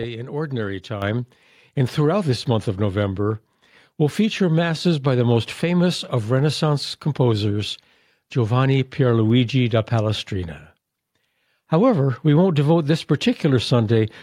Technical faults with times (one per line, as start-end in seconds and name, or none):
1.02 microphone volume stepped up